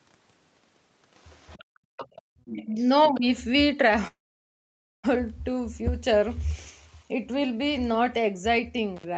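From 1.18 to 1.64 s a faint second voice, very low under the speech, is the other side's voice leaking through, likely loudspeaker echo the canceller missed. It returns louder at 1.97 to 2.21 s, 2.45 to 2.84 s and briefly at 3.04 to 3.10 s. Between those, at 1.64 to 1.97 s and 2.21 to 2.38 s, the room tone drops by about 37 and 40 dB. This is background gated by the echo canceller: the ambience vanishes and then returns.

At 2.66 to 2.88 s and 3.08 to 3.26 s the talker's own speech dips by about 15 dB while the echo plays. That is speech suppressed in double talk, likely the canceller turning both sides down at once. It is a partial duck of the speech rather than a full dropout.

From 4.07 to 5.05 s a call audio freeze leaves a brief fading tail and then about 0.89 s of silence. The audio then resumes exactly where it stopped, with nothing lost, which fits a likely jitter-buffer underrun. 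Packet loss would have cut sound out instead of delaying it.

At 8.97 to 9.05 s a roughly 50 ms intermittent contact cuts the sound, with crackle at both edges, unlike the clean fade of the freeze.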